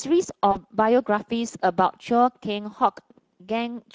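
Speex codec damage runs through the whole speech clip: a CELP coder short of excitation bits leaves the voice hoarse and noisy, consistent with a mid-rate setting near 17 kbps. VoIP packet loss concealed by the speech codec occurs from 0.51 to 0.58 s. The decoder stretched its last pitch and filter into a fading sound, which points to about 40 ms of lost packets, and the voice stays weak briefly after.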